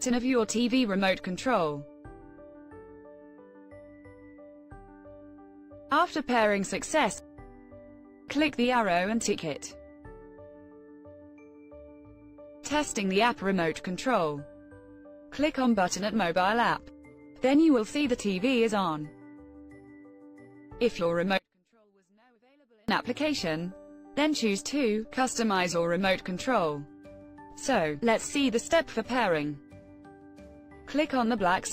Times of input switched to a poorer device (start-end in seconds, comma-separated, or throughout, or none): none